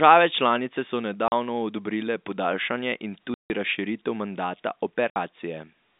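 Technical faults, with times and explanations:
1.28–1.32 s, 3.34–3.50 s and 5.11–5.16 s, packet loss filled with silence: the receiver substituted silence for lost packets, leaving 40, 160 and 60 ms holes with hard edges, consistent with 20 ms packets.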